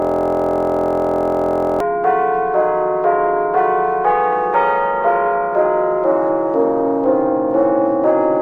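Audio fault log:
0.00–1.80 s, system hang loop: already running when the audio begins, one 23.22 ms fragment repeats identically 77 times as the frozen system leaves the hardware cycling its buffer, which fits 1024 samples. The result is a steady 43.1 Hz buzz, not irregular stutter.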